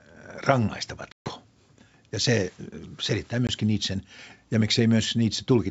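Packet loss on an ADPCM call drops about 140 ms of the stream at 1.12–1.31 s and 20 ms at 3.47–3.49 s. The decoder's predictor and step size lose track, so each hard-edged silent gap is followed by speech returning with brief distortion.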